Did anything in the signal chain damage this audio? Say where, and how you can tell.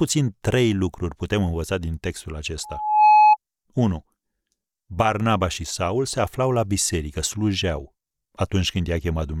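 Yes. Loudspeaker feedback squeal in the analogue mic-speaker loop, 2.63 to 3.37 s. An 850 Hz tone swells to about 10 dB above the speech. Loop gain exceeded one.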